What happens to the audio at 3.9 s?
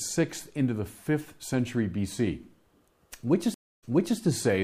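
A stream reconnect spans 3.54 to 4.19 s. The link drops, leaving 279 ms of silence, then a restarted decoder resumes the speech 366 ms earlier.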